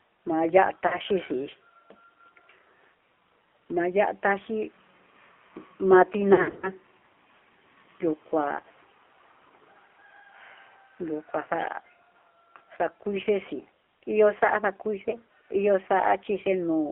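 AMR narrowband mobile codec, throughout the speech: the whole clip sits in a telephone band of roughly 300 Hz to 3.4 kHz. Everything is rebuilt from a vocal-tract model excited by a few pulses per subframe, so the voice sounds plainly buzzy and synthetic. That degree of coarseness points to a low mode, around 7.4 kbps.

Lost AMR speech frames, 0.88 to 0.97 s: about 40 ms of frames failed and were concealed. The decoder repeated the last good pitch and filter settings at falling gain, giving a short dip with a warbly edge.

Lost AMR speech frames, 6.34 to 6.72 s: losses totalling about 200 ms are scattered across this stretch. The longest gap is 60 ms. The speech stutters, smears and sags repeatedly, then recovers rough and weak.

Lost AMR speech frames, 15.10 to 15.17 s: a single dropout of about 20 ms, consistent with one lost frame, heard as a brief warbling dip.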